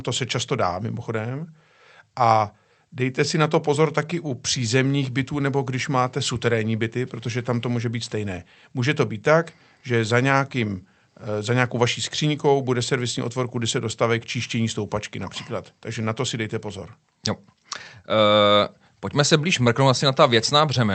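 No technical faults can be heard anywhere in this speech recording. It has passed through a WebRTC call path, and the sound tops out at around 8 kHz, which fits an Opus call codec running in wideband mode.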